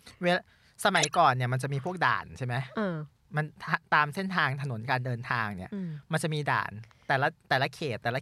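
Corrupt frame decoded, 0.96 to 1.15 s, in this speech clip: a loud burst of misplaced energy, consistent with around seven damaged compressed frames the decoder played anyway.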